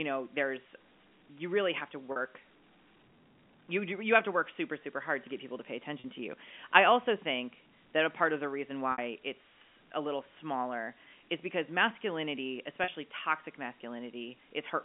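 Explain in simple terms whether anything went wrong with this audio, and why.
Packet loss with pitch repetition causes brief buzzy holds at 2.12 s (after "really have to"), 6.0 s, 8.92 s (after "part of the reason") and 12.84 s (after "smaller is because masculinity"). Each 40 ms gap (60 ms at 8.92 s) was bridged by repeating the last voice cycle.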